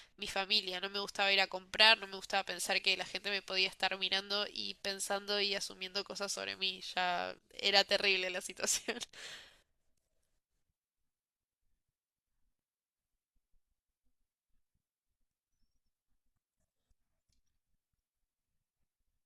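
A speech recording, with no technical fault to point to anywhere in it. Nothing heard at any point calls for a time or a cause.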